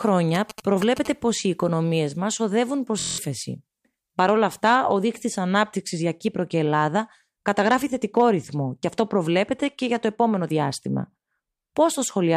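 From 0.35 to 1.07 s, GSM signalling bursts cut into the speech. A 2G phone nearby is sending short groups of radio bursts, as it does while signalling the network. The audio circuit rectifies that radio energy into sound. The result is a galloping dit-dit-dit of brief buzzes. The buzz repeats at about 217 Hz. It sits roughly 10 dB below the speech.

At 3.00 s a system hang loop begins and runs to 3.18 s. The computer or its driver froze, but the sound hardware kept replaying the same ring buffer. One 23 ms slice of audio repeats exactly, eight times over. That repeat rate of about 43 Hz gives a steady buzz at the loop rate. The loop length fits a 1024-sample buffer. Roughly a fifth of a second of real audio is lost.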